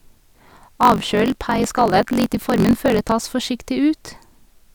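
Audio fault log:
0.00–3.14 s, block size mismatch (truncated): the speech is overlaid with a steady buzz at 46.9 Hz and runs 1.12 times fast while keeping about its normal pitch. Each block written is longer than the block read, so the tail of every block is dropped. A 46.9 Hz block rate fits a 1024-sample read. A sample-rate error would also raise the pitch, and padded blocks would slow the sound with gaps, not speed it up.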